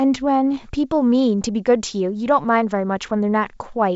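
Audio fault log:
Nothing to log here: the speech comes through G.722 wideband telephone coding at 64 kbit/s, and any trace that coding leaves on it is faint at most.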